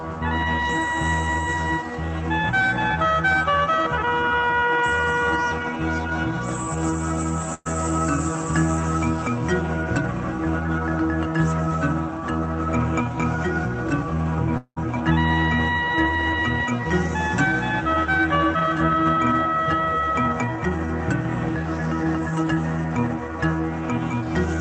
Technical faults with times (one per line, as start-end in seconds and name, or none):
7.54-7.67 burst of packet loss
14.57-14.78 long network dropout